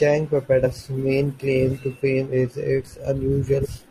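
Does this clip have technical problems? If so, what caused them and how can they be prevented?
Yes. Compressed frames are skipped at 0.62–0.67 s, just before "main claim to fame," and at 3.61–3.67 s. About 150 ms and 700 ms of speech vanish, fitting a few and then many roughly 43 ms frames. Using error-checked transfer and storage prevents this.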